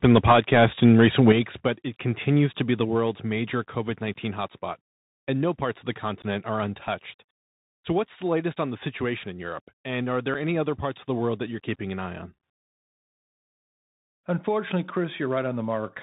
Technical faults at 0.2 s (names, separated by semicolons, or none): Bluetooth CVSD headset codec; microphone overload